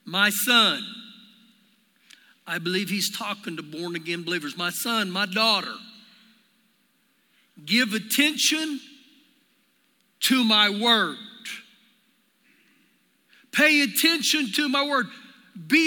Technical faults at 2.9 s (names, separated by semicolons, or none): none